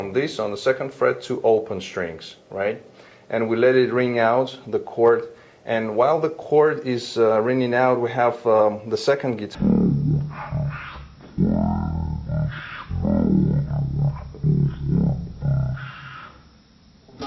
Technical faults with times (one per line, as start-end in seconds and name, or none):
9.55-17.26 wrong sample rate